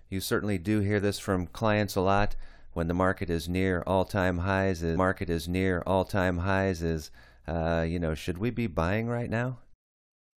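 At 4.96 s the speech jumps back and replays about 2.0 s of material, running until 6.96 s, just before "uh you know should". This is a stream segment repeated: the player queued or fetched the same chunk twice, so a whole stretch of programme is heard again after a small blip at the seam. Unlike a buffer-underrun stutter, which loops tiny fragments, this repeats a full two-second passage intact, adding that time to the clip.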